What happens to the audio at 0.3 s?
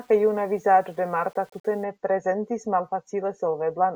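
At 0.3 s the speech is likely being requantised to very few levels with plain rounding and no dither, which fits an 8-bit signal. This low bit depth without dither lasts from 0.0 to 1.84 s, ending just before "ne prezentis". Because the rounding error tracks the waveform, it sits roughly 35 dB below the speech and sounds like a grainy roughness that changes with each sound, harshest in the quiet parts.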